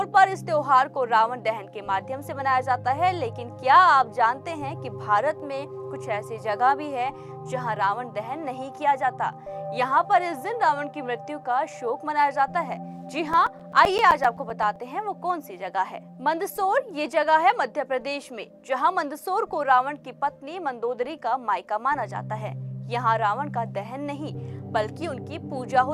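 CD scratch ticks from 13.33 to 14.76 s: twelve short ticks, about eight per second, one per disc turn, too regular for random clicks.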